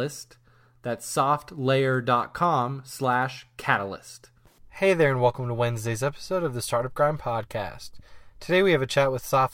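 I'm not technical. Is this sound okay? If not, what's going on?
No. From about 0.15 s to 9.52 s there are clock slip clicks: a faint, regular ticking, roughly every 0.07 s, so around fourteen per second and well over a hundred in all. Because they come this fast, they blur into a soft rattle under the speech. The likely cause is two pieces of equipment keeping time separately and drifting apart, so a single sample is skipped or doubled each time the gap adds up to one.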